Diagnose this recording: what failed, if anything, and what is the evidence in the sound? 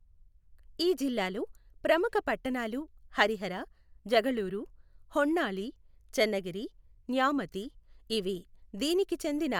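Nothing in this speech recording points to a failure at any stage; it holds together without a single moment that gives the ear anything to chase.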